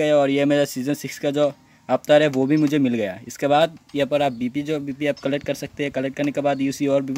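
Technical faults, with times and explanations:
3.62–5.12 s, crude rate conversion: samples were dropped or repeated rather than filtered, which fits a 48 kHz to 44.1 kHz change, leaving error roughly 30 dB below the signal that forms inharmonic tones, heard as a gritty fizz tracking loud and high sound.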